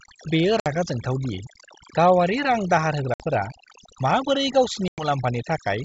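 Speech, heard through a wideband G.722 call, has its background pulled down throughout into near-silent gaps flecked by twinkling specks. That is overdone noise removal: the suppressor pulls individual frequency bands down or out whenever they resemble its noise estimate, taking quiet parts of the voice with them. Sharp-edged holes appear at 0.60–0.66 s, 3.14–3.24 s and 4.88–5.06 s, and the sound comes back slightly distorted before settling. This is packet loss on an ADPCM call. A few packets' worth of audio, about 60, 60 and 100 ms, were replaced by silence, which put the decoder's predictor and step size out of step with the sender's.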